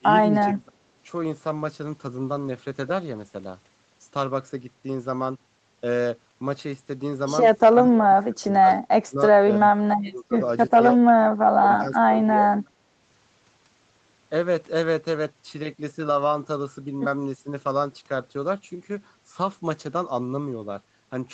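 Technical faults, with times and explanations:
0.00–0.07 s, 0.27–0.80 s, 7.69–8.68 s, 9.05–9.19 s, 9.58–10.37 s and 11.57–12.47 s, speech suppressed in double talk: the speech sinks by about 25 to 30 dB in uneven pieces. The likely cause is an echo canceller that heard the far side talking at the same time, could not separate the near talker from the loudspeaker echo, and pushed both down. Unlike packet loss, the gaps are not abrupt clicks or robotic repeats but level ducking that tracks the overlap.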